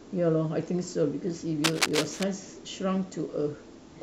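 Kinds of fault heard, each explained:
Cable scratch noise: from 1.64 to 2.23 s, ragged scratching about as loud as the speech, likely a worn connector whose contact resistance jumps as it moves.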